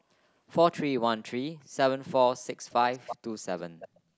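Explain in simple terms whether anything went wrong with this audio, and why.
A faint repeat of the speech, a third of a second late, appears at 2.94 to 3.16 s and, quieter, 3.79 to 4.0 s. This is echo leak, likely loudspeaker sound that the far side's echo canceller missed.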